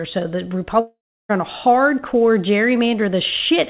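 From 0.8 to 1.31 s, a fading buzz, then a third of a second of silence; speech returns missing a piece, likely a long network dropout rather than a brief glitch.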